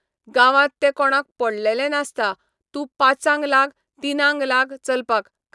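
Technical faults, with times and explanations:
No technical faults can be heard anywhere in the speech recording, and the signal stays continuous and stable throughout.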